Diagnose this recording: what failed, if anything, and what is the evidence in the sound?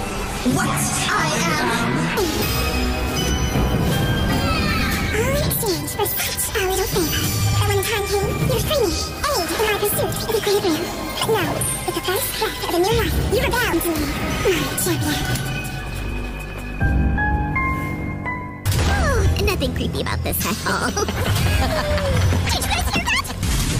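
No fault is audible here.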